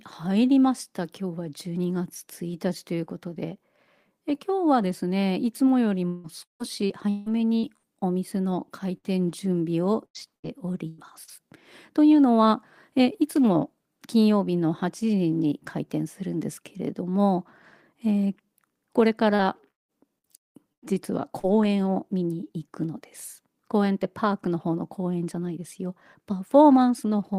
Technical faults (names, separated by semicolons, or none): repeated packet loss (robotic sound); burst of packet loss